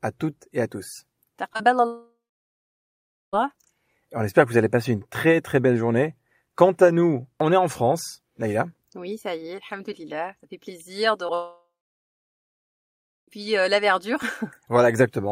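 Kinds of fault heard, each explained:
Repeated packet loss (robotic sound): Packets went missing three times in quick succession from 1.53 to 1.65 s, just after "toutes et à tous". Each gap of up to 30 ms was patched by extending the previous sound, so nearly half that stretch turns choppy.
Long network dropout: Two long gaps, most likely from the network connection dropping out. At 1.87 to 3.35 s and again at 11.35 to 13.37 s, the last sound trails off into a fading buzz or hiss and then goes silent for about 1.2 s and 1.6 s. The sound comes back at "euh la verdure" with the missing part gone.
Short concealed packet loss: About 20 ms of audio failed to reach the decoder in time at 11.27 to 11.31 s, right after "fait plaisir de". The receiver filled that gap by continuing the preceding sound, which leaves a brief smear just before the second dropout starts.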